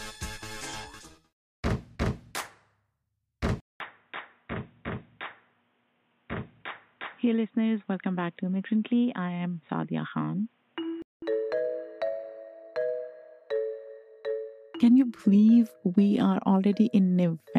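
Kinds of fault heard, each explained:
Input switched to a poorer device: at 3.60 s the audio cuts out for 200 ms, then returns a few decibels quieter, with a narrower band and a faint new noise floor, likely from a change of capture device. Full bandwidth returns at 11.22 s.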